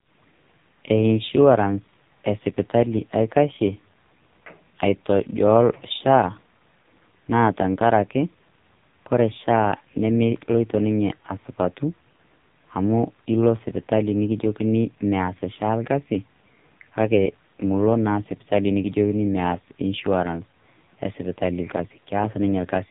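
AMR narrowband mobile codec, throughout: speech rebuilt from a vocal-tract model and sparse pulses stops at 3.8 kHz and sounds heavily buzzy and synthetic, which fits a bitrate near 5 kbps.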